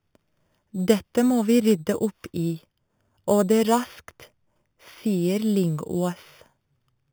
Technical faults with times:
0.00-7.12 imaging from sample-and-hold upsampling

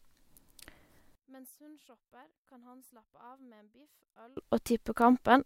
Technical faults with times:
1.15-4.37 one channel inverted

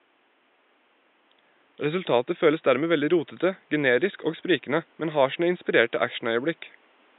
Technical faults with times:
none

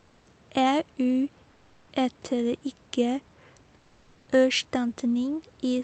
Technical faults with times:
0.00-0.23 comfort noise in place of the background
1.51-1.87 comfort noise in place of the background
3.79-4.27 comfort noise in place of the background

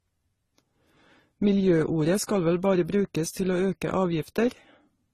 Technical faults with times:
0.00-5.14 transcoding between lossy codecs

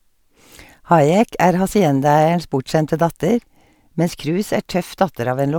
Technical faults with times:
none

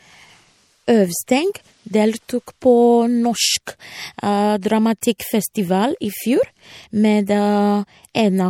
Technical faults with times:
0.00-8.49 MP3 compression
4.61 pre-echo
5.01-5.20 pre-echo

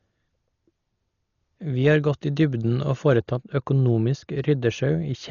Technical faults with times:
0.00-5.30 Dolby Digital compression
3.17-5.30 de-emphasis applied wrongly

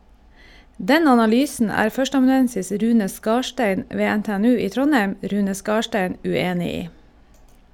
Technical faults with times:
none

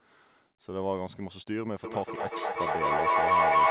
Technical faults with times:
1.84-3.71 feedback echo between two devices

